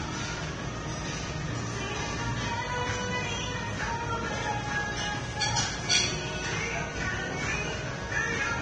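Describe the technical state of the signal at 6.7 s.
At 6.7 s, as across the whole clip, the audio stops dead at about 9.7 kHz and carries that smeared, thin low-bitrate character. It's likely low-bitrate audio saved at a high bitrate: a heavily compressed source re-encoded generously, which can't restore the missing top end.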